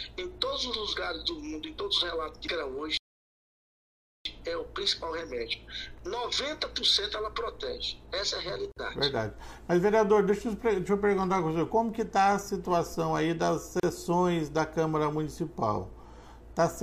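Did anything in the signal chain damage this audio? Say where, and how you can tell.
Yes. There is a gap at a join of encoded pieces, at the codec stage, at 8.72–8.76 s (48 ms) and 13.80–13.83 s (35 ms). The sound drops into silence and then resumes where it left off. The pieces were encoded separately and joined untrimmed, leaving encoder delay and last-frame padding in place.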